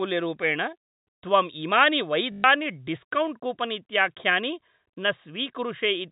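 After "त्वम् इमानि", from 2.32 to 2.44 s, packet loss with the last packet repeated replays one 20 ms slice, buzzing at 50 Hz, not falling silent like a gap.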